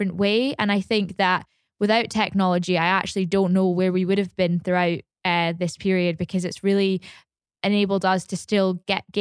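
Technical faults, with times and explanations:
No technical faults are audible anywhere in this speech recording.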